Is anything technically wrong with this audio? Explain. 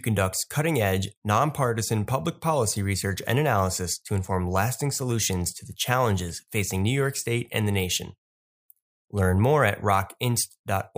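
No, nothing technically wrong is audible anywhere in this speech recording.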